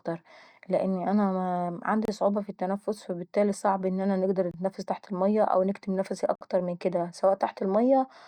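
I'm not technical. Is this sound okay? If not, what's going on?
No. Bluetooth stalls at 2.05 to 2.08 s, 4.51 to 4.54 s and 6.35 to 6.41 s: the speech drops to silence for about 30, 26 and 56 ms, right after "لان انا", "فالبتالي صعب ان انا" and "المية أو نكتم نفسي", then carries on. The likely cause is interference delaying the wireless audio, so the headphones ran out of sound to play and paused until it arrived.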